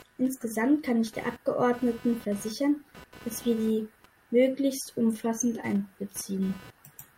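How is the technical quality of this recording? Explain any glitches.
The recording is compromised by one fault that runs through the whole speech clip.

Computer activity noise is present throughout. Changing load from the processor, graphics card or mouse pulls on a ground the audio circuit shares with the computer, and that fluctuation lands in the signal. Here it comes through as a buzzy, chirping pulse repeating at roughly 300 Hz, sitting around 25 dB below the speech. It shifts with the machine's activity rather than following the voice.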